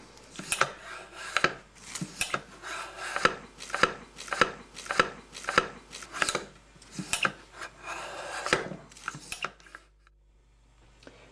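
A ground loop or a nearby transformer is letting the 50 Hz power line leak into the signal path for the whole clip, so a steady mains hum sits under the audio from start to finish. It is a low, constant drone at 50 Hz, with some of its low harmonics, roughly 30 dB below the wanted sound. It doesn't change with the material. Separately, the playback or streaming chain likely stalled between 3.73 and 6.06 s and kept resending the last fragment it had buffered. The result is a broken-record loop: a 0.58 s piece of audio repeats exactly, back to back, four times. Whatever should have played during those 2.3 seconds never arrives, and the sound simply resumes at 6.06 s.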